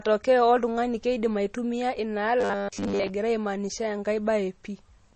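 The whole speech clip stops dead at 8.3 kHz and has that watery, smeared MP3 texture. That's most likely low-bitrate audio saved at a high bitrate. The damage fits an MP3 around 32 kbit/s later re-encoded near 256 kbit/s, and the bigger file can't bring back what the first pass threw away.

From 2.41 to 3.10 s the speech turns into a rigid metallic buzz locked at 100 Hz. That's robotic sound from repeated short buffers. Audio was likely arriving too slowly, so the player kept looping a 10 ms chunk and skipped over most of that stretch.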